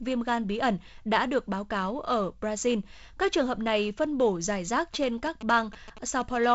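From 4.94 to 6.46 s, just after "phân bổ giải rác", a galloping dit-dit-dit of short 217 Hz buzzes sits roughly 15 dB under the speech. These are GSM signalling bursts: a nearby 2G phone's radio pulses, rectified by the audio circuitry into audible interference.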